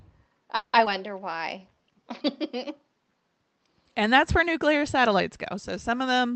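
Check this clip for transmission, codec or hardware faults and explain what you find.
Three transmission faults are audible, all within roughly the first two seconds of this speech clip, and all come from a real-time call path whose audio tops out near 8 kHz, which fits Opus running in wideband mode.

From 0.55 to 0.76 s there is a call audio freeze. The last sound is stretched into a fading buzz lasting about 180 ms, with no true silence, and then the speech resumes exactly where it stopped. Packets were likely held up in transit, so the jitter buffer ran dry and the receiver extended what it had. Nothing is lost, which distinguishes it from a skip: the audio is delayed rather than cut.

At 0.85 to 0.89 s comes a skip ahead. Around 70 ms of speech is gone, and the two sides are joined with only about 10 ms of filler, so the speech lurches forward abruptly. Audio was dropped while later packets were already queued, and playback went straight on to them. 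Unlike the freeze, there is no stretched sound here, just a missing piece and a near-seamless jump.

From 1.25 to 2.03 s there is a jitter buffer slow-down. The receiver repeated single pitch periods and pause fragments to rebuild its reserve, adding 71 ms in total and running the speech at about 92% speed. Sounds are drawn out over the whole stretch while the pitch stays unchanged. The effect is spread out as a smooth lengthening, not concentrated in one hold, and that is what sets it apart from the freeze.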